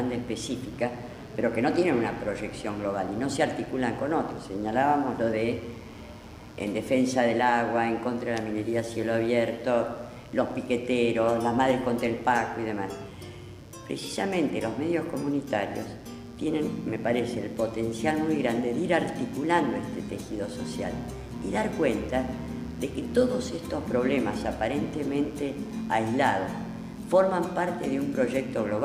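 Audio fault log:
throughout, mains buzz: a raspy buzz sits under the whole clip, roughly 30 dB below the sound, locked to a 60 Hz supply. Sharp switching spikes from something like a dimmer, rectifier or poorly shielded cable get into the path twice per mains cycle, so the buzz pulses at 120 Hz and carries a dense row of 60 Hz harmonics up into the kilohertz range. A plain mains hum would be a smooth, low tone near 60 Hz; this buzz sounds edgy and bright instead.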